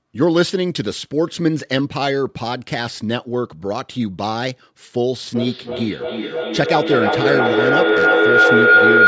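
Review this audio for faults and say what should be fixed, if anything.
A feedback howl starts at 5.35 s and runs to the end of the clip. Sound from a loudspeaker is reaching a microphone on the same call and gaining level on each trip. The repeats narrow to a tone around 1.5 kHz. The loop repeats roughly every 0.3 s, and the howl peaks about 7 dB above the speech. To prevent it, mute one of the devices sharing the room, or use headphones so the loudspeaker cannot feed the microphone.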